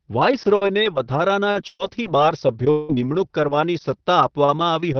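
Repeated packet loss (robotic sound) runs from 1.51 to 3.07 s. Three holes in the stream, the longest 180 ms, are each patched by stretching the preceding sound. Roughly 0.4 s of speech is rebuilt this way, so it turns choppy, with pieces missing.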